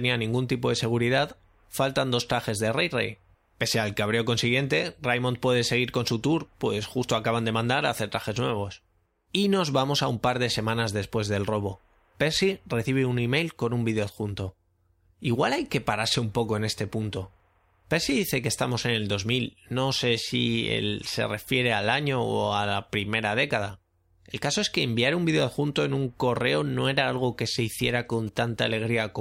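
GSM signalling bursts break into this speech clip from 27.80 to 28.38 s, just after "era algo que se", as a galloping dit-dit-dit of short 217 Hz buzzes roughly 25 dB below the voice. A nearby 2G phone was sending short groups of radio bursts while signalling, and the audio circuitry rectified that RF, turning the burst envelope into audible clicks and a buzz at the 217 Hz repetition rate.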